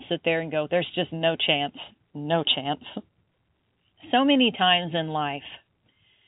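Nothing here is actually wrong: it's a stretch of speech carried over ordinary telephone coding, which is why the sound tops out around 3.8 kHz, and that band limit is just how the line works rather than a problem to chase.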